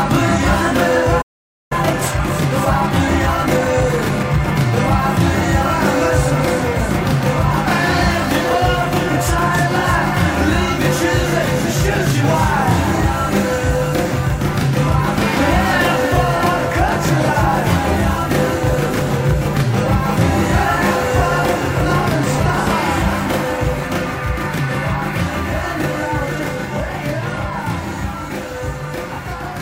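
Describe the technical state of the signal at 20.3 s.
At 20.3 s the signal is intact, with no audible fault at that moment.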